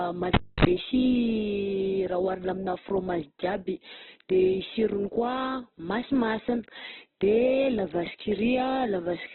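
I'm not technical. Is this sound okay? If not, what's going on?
No. The whole recording sounds muffled, grainy and a bit rough, with nothing above about 4.1 kHz, so it's like hearing speech down an old phone line. That's most likely Opus compression squeezed very hard, which throws away the upper range and roughens what's left.

Right near the start there's a cable pulled and plugged in, from 0.34 to 0.65 s. You get a pop, about a quarter second of near silence, a short burst of low 50 Hz mains buzz as the plug touches, then another pop as sound returns.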